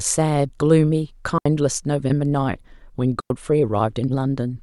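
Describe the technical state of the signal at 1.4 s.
A digital wireless dropout runs from 1.38 to 1.46 s. The receiver loses data and mutes for 74 ms. It leaves a clean gap with no noise burst.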